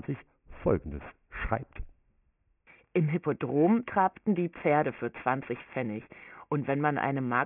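From start to finish the speech carries aliasing: the audio was taken down to a much lower sample rate without a low-pass filter first, so everything above the fold point at 3 kHz reflects back below it as unrelated tones. Consonants like s and sh come out gritty and metallic, with that folded energy sitting roughly 20 dB under the speech. A spectrogram shows content running hard up to a sharp ceiling at 3 kHz, which fits a 6 kHz rate, with mirrored streaks beneath it.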